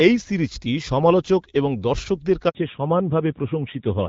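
At 2.49 s, right after "সিরিজটি সমালোচক এবং দর্শকদের", a handover gap cuts the speech to silence for 60 ms as the call switches networks. The waveform shows a flat line, and the spectrogram shows a blank vertical strip. From 2.55 s to the end, a fallback to narrowband strips everything above 4 kHz, leaving a sharp horizontal ceiling on the spectrogram. The speech turns dull and rough, consistent with a drop from the light-damage HD Voice codec to a narrowband codec near 7.4 kbit/s.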